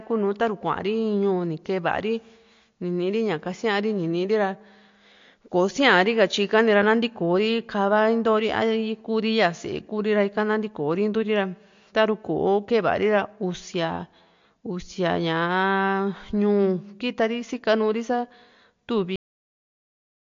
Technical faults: MP3 compression; cut-off end

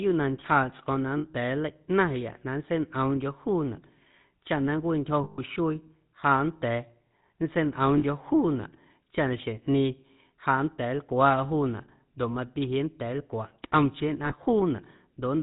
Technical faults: GSM full-rate codec; lost GSM frames

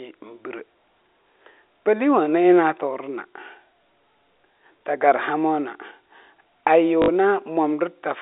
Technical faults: loudspeaker feedback squeal; packet loss with last packet repeated

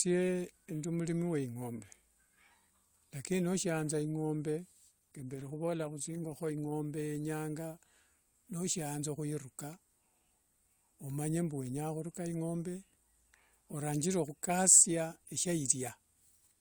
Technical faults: adaptive stream at a lower bitrate

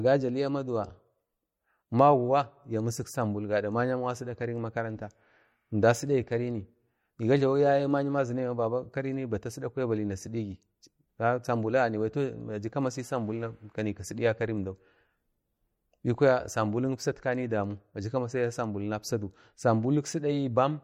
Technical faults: MP3 compression

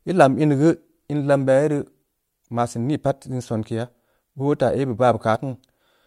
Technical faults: damaged data in a compressed stream

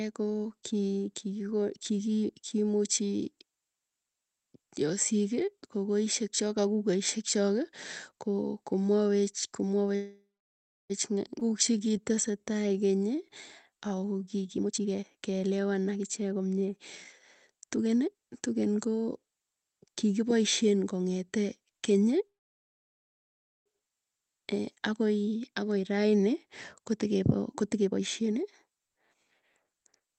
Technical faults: call audio freeze; skip ahead; jitter buffer slow-down; jitter buffer speed-up

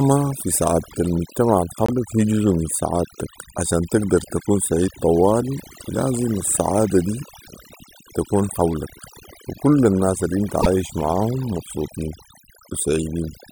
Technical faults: overdone noise removal; broken MP3 bit reservoir

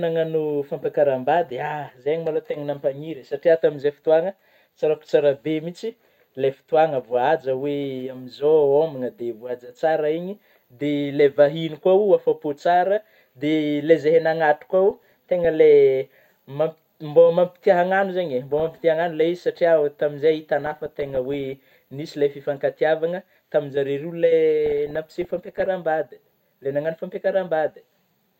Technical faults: DAB burbling

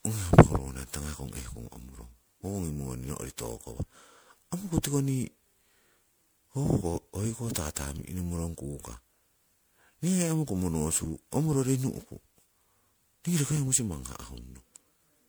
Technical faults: generation loss

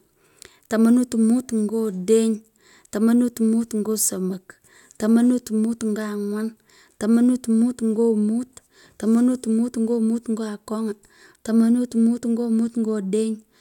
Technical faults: none

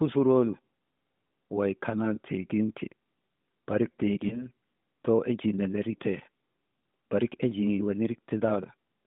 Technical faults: lost AMR speech frames

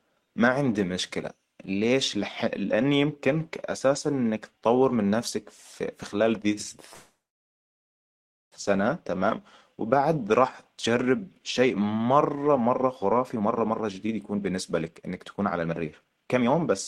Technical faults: call audio freeze; jitter buffer speed-up

